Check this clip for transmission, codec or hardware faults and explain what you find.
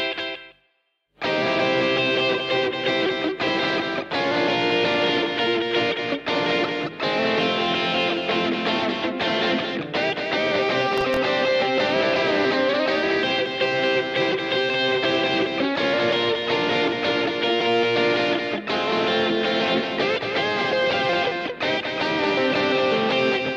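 Two faults are audible: a doubled audio track running through the whole clip, and a short burst of processor overload crackle.

The doubled audio track is present from start to finish. A second, full-band copy of the sound trails the original by roughly 200 ms. It sits a few decibels lower, around 5 dB down. The copy is dry, with no decay or room colour. The likely cause is the same signal reaching the mix twice, once through a slower path. The result is a flat, slapback-style echo on everything.

Processor overload crackle appears from 10.98 to 11.17 s. The processor fell behind and missed several buffer deadlines in a row. Each miss replayed a scrap of old audio with hard edges instead of fresh samples. The sound suggests a handful of very short buffers, around 1.5 ms each. Heard together, these produce a brief gritty tearing that rides on the sound and stops once the load clears.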